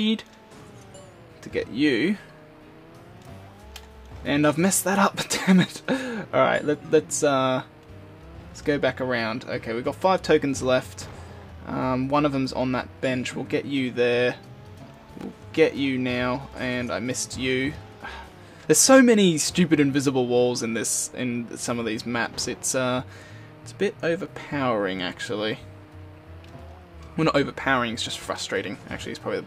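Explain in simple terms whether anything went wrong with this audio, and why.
Two short bursts of loose connector crackle occur, at 15.11 to 15.24 s and 24.20 to 24.28 s. A worn plug or socket contact flickers on and off, chopping the sound into scratchy, irregular crackle, unlike a single clean digital click or a smooth silent dropout.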